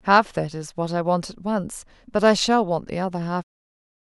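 The speech signal shows no technical faults, and its level fades out smoothly near the end, around 3.4 s, with no click or hard edge.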